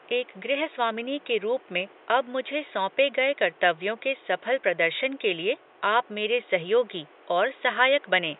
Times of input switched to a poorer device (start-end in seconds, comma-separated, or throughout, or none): none